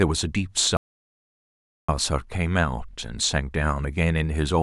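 At 0.77 s the speech cuts off abruptly into an audio dropout to silence that lasts until 1.89 s, about 1.12 s in all. The gap is silent, with no room tone or background left, and the speech resumes mid-flow at the far edge. The likely cause is a lost input, such as a disconnected device, a failed link or an unintended mute, while recording carried on writing silence. Whatever was spoken during that stretch is missing.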